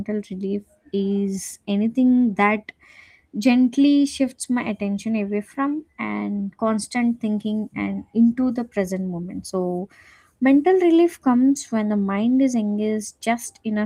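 No technical faults can be heard in this speech.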